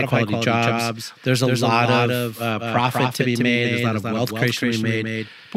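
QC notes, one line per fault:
Throughout: doubled audio track, a full-band copy of the speech trails roughly 200 ms behind at about 5 dB lower, likely from a slower second capture or an out-of-step edit.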